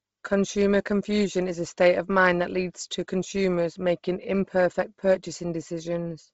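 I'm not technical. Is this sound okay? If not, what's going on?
No. The speech sounds muffled and heavily grainy for the whole clip, with a breathy, hissy edge. Nothing above about 7.7 kHz comes through. This is likely Bluetooth LC3 compression, which squeezes the sound hard, dropping high detail and filling gaps with noise.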